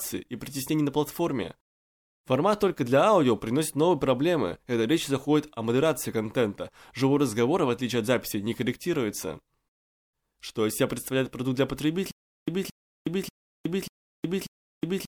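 From 12.11 s to the end of the speech, the sound falls into a stutter with silent gaps: a 223 ms fragment replays five times, each followed by about 366 ms of dead digital silence, so the burst returns every 589 ms. This is likely a stalled player or stream retrying and replaying its last buffer before running empty. Unlike a simple dropout, the same fragment keeps coming back, and unlike a seamless loop, true silence separates each repeat.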